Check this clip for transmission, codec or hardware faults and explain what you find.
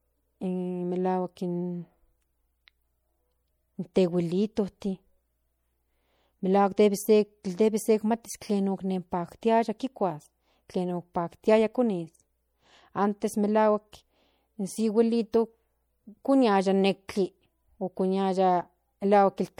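Two codec faults are audible. Throughout the speech there is plainly audible swirly, watery coding damage, likely from MP3 compression at a bitrate that fits about 64 kbps. Weak frequency lines flicker on and off between frames, and the spectrogram shows patchy holes and nothing above 21 kHz.

At 3.94 s and 17.08 s there is pre-echo. Quantisation noise spreads across a transform block ahead of sharp attacks, adding short hiss lasting 17 ms and 11 ms. On the waveform, noise appears just before each onset.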